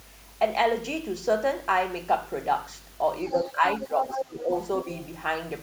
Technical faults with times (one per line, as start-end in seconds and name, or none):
0.00-5.62 mains hum
3.25-3.52 other side's voice leaking through
3.31-4.51 speech suppressed in double talk
3.98-4.40 other side's voice leaking through
4.95-5.07 other side's voice leaking through